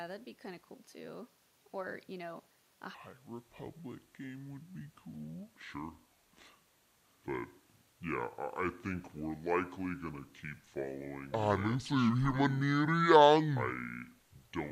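A playback or editing stage most likely ran on the wrong clock from 2.94 s onward, so this speech recording has a section at the wrong speed that lasts to the end at 14.72 s. That stretch plays at 0.642 times its recorded rate, which drags pitch down by about seven semitones along with the tempo. From that point the speech turns deep, slow and sluggish, with the timing and pitch shifting together in one abrupt step rather than gradually.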